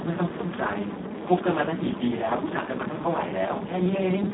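From start to finish the speech carries heavy Speex codec damage, band-limited to roughly 150 Hz–3.5 kHz with nothing above 3.8 kHz. The CELP excitation is starved of bits, which fits a rate near 4 kbps, so voicing sounds hoarse and noisy.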